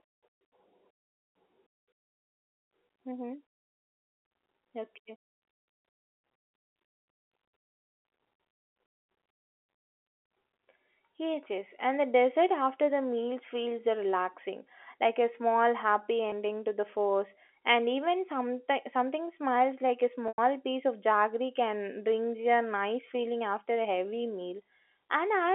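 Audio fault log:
16.30–16.32 s and 20.28–20.38 s, packet loss with pitch repetition: the first gap holds the sound briefly with a buzzy sustain. The 100 ms gap buzzes, fades to silence, then cross-fades back. The receiver looped the last pitch period to cover missing packets over the band-limited telephone line.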